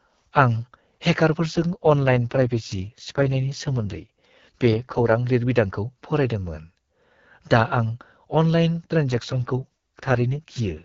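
A speech recording carried over an AMR wideband (HD Voice) link. Two AMR rate drops occur, from 1.49 to 5.16 s and from 9.09 s to the end at 10.84 s. In both, the voice turns rough, raspy and synthetic. The bandwidth stays the same and there is no gap. The sound fits the codec being stepped down from about 12.65 to 6.6 kbit/s, with the spare bits spent on error protection over a weak radio link.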